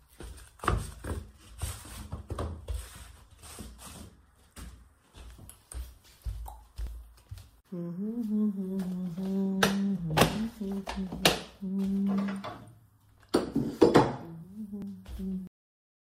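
At 6.87 s and again at 14.82 s the sound skips forward, with roughly 20 ms gone each time and the two sides butted straight together. That's audio missing between chunks, likely from a recorder working in 4-second blocks and dropping a sliver at the handover.

Then at 15.47 s the sound just stops dead mid-event and falls to digital silence with no decay at all. That's a cut-off end: the final stretch of buffers never got written, so the last half-second or so is simply empty.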